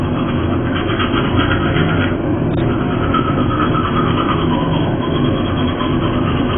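AAC compression runs through the whole clip, from start to finish: the sound is heavily degraded, with nothing above 3.4 kHz, leaving it dull and boxed-in. The likely cause is AAC-LC coding at a very low bitrate, which fits roughly 16 kbps. To stay within so few bits, the encoder discards the upper spectrum entirely and quantises what remains coarsely, so detail smears together and the surviving bands take on a warbling, gritty texture.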